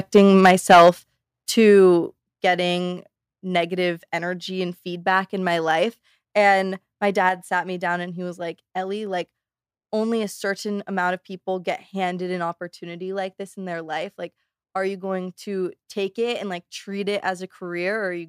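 From 0.15 to 0.9 s the speech shows microphone overload: the input was likely driven about 8 dB past the converter's limit, so roughly one sample in twenty is flattened. The loudest syllables gain a harsh, crackly edge. The waveform shows squared-off tops, and the spectrogram shows bright broadband splatter above each peak.

The microphone volume is stepped down four times, likely by the call software reacting to a microphone it found too loud or clipping: about 2 dB at 0.18 s, about 6 dB at 1.17 s before "to getting negative energy", about 5 dB at 2.19 s before "getting negative energy and", and about 3 dB at 7.29 s before "sat me down and". Each step is an abrupt drop in voice and background together. On the waveform the envelope visibly shrinks, and on the spectrogram everything dims at once.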